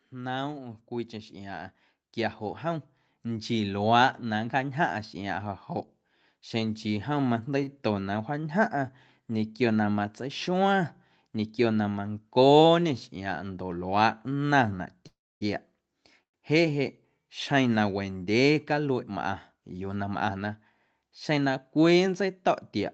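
From 0.09 to 13.9 s, automatic gain rising: the gain control judged the speech input too quiet and kept raising its gain, by about 14 dB in total, so the voice and the background noise grow louder together as one slow, steady swell.

At 7.63 to 7.69 s and again at 8.41 to 8.45 s there is a short stall from a late packet. The jitter buffer ran dry while it waited, and the receiver stretched the last sound by 36 ms and then 19 ms before carrying on exactly where it stopped. Nothing is lost, but each moment is held slightly too long, with a faint buzzy smear.

From 15.07 to 15.43 s and from 16.23 to 16.36 s the sound drags on briefly, then drops to silence for about 250 ms and then about 90 ms before resuming from the same point. This is likely a call audio freeze, with delayed packets emptying the buffer and gaps of 339 ms and 108 ms being inserted.

From 19.56 to 20.35 s comes a jitter buffer speed-up. 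Having built up surplus delay, the receiver cut out many pitch-period-sized slices, about a tenth of a second altogether, so the speech runs at 111% speed with unchanged pitch and sounds hurried. Throughout, the Opus call path limits the audio to 8 kHz.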